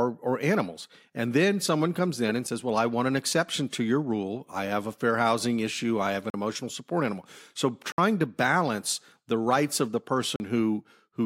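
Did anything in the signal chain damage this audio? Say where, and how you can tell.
Yes. There are four blocks of digital silence, introduced at the driver or buffer stage: a 5.8 ms gap at 2.47 s after "someone comes in and", then 40 ms at 6.30–6.34 s between "issue I have an" and "emotional support animal", 60 ms at 7.92–7.98 s, and 40 ms at 10.36–10.40 s after "the rights of the". Each block drops straight to silence and returns with no fade. The shortest gap fits one unfilled 256-sample buffer. Unlike network loss concealment, nothing is filled in or smeared across the gap.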